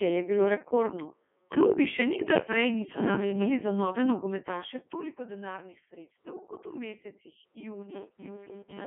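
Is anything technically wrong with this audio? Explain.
Yes, there are two faults.

Throughout the clip, the speech has gone through the Codec 2 vocoder at 3.2 kbit/s with heavy damage. Only pitch, voicing, energy and a rough spectral envelope survive, and the decoder rebuilds the voice from sine waves, so the original waveform is lost. It sounds buzzy and robotic, squeezed into a 200 Hz to 3.5 kHz line band. A spectrogram shows a hard ceiling with nothing above 3.7 kHz and unnaturally regular harmonic combs. The waveform looks smoothed and synthetic.

From 7.76 s to the end at 8.87 s, robotic sound from repeated short buffers takes over. Audio is arriving too rarely, and the gap is filled by looping the last chunk, which likely fits a 5 ms buffer. That matches the rigid 200 Hz buzz, and most of the real audio in this stretch is skipped. It becomes a metallic drone that only loosely follows the speech. 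On a spectrogram, fixed horizontal harmonics at 200 Hz appear. The waveform shows identical 5 ms cycles repeating.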